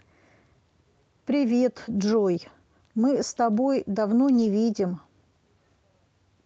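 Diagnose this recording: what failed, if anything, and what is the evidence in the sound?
A network stage problem: packets went missing around 4.33 to 4.47 s, and the lost packet was rebuilt from error correction rather than dropped. You don't hear a gap. Instead, about 80 ms of the speech turns rougher and noisier, which fits several lost packets each covered by the low-bitrate backup copy that Opus tucks into the following packet. The decoder played those coarse copies, so the audio stays continuous but degraded through that stretch of the Opus call path.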